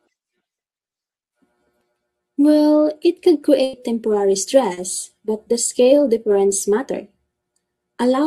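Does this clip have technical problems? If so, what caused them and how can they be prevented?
Yes. Right after "it could", from 3.63 to 3.75 s, the last sound is held and faded for about 100 ms, then resumes with 100 ms gone: a burst of packet loss the receiver concealed. A larger jitter buffer, forward error correction, or prioritising voice traffic on the network would help.

Just before "but the scale difference", at 4.73 to 4.79 s, a brief smear covers a 40 ms hole: short concealed packet loss, patched by extending the previous sound. More stable network delivery or redundant packet coding would prevent it.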